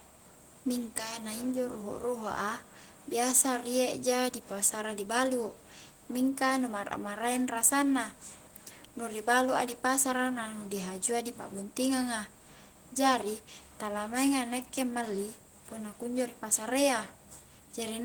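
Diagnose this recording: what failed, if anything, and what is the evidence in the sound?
Listening to the speech recording, nothing stood out as having gone wrong at any stage along the chain.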